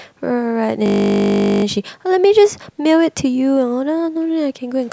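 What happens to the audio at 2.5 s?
Nothing goes wrong at 2.5 s: the speech runs through that moment intact, with no dropout, click, glitch or other fault.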